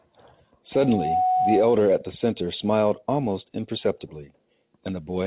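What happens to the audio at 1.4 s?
At 1.4 s a loudspeaker feedback squeal is sounding, from 0.73 to 1.81 s: a steady 741 Hz tone, fed back through the microphone, that swells over roughly 0.4 s to about the level of the speech. A spectrogram shows it as one bright horizontal line at 741 Hz.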